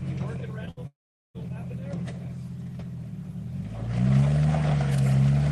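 A short concealed packet loss occurs at 0.65 to 0.69 s. About 20 ms of audio never arrived in time to be decoded. The receiver covered most of the hole by extending the preceding sound for roughly 13 ms, then crossfaded back into the real signal. The result is a quick smear or wobble at that point, where a brief piece of the sound has been replaced by a stretched copy of what came just before.

A burst of packet loss follows at 0.71 to 0.79 s, with about 60 ms missing in one stretch. Over nearly all of that gap the receiver kept synthesising the last sound while lowering its level. What should have been new material becomes a short held buzz or fading hiss. When playback resumes, it picks up further along, and the content from the gap is simply gone.

A long network dropout runs from 0.87 to 1.36 s. About 480 ms of audio is missing, most likely because nothing reached the receiver over the network during that time. 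Concealment stretches the final sound briefly and lets it fade. For roughly the last 400 ms of the gap only silence remains. The audio then returns further on, and nothing from that half-second is recovered.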